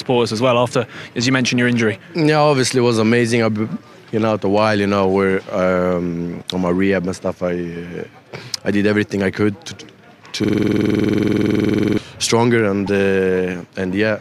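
The audio breaks down in two places. From 10.44 to 11.98 s it freezes into a system hang loop. The machine or its driver stopped responding while the sound hardware kept replaying its ring buffer. One 46.44 ms slice of audio repeats exactly, over thirty times. At 21.5 repeats per second this is heard as a hard, rattling stutter bordering on a buzz. A loop of that length fits a 2048-sample buffer. A second, much shorter fault follows at 12.86 to 12.90 s, a corrupt frame decoded. Flipped bits in the compressed stream reached the decoder, which played the damaged data anyway. Misread values put energy at the wrong frequencies. The result is a brief glitch lasting about 34 ms, which points to roughly two damaged frames.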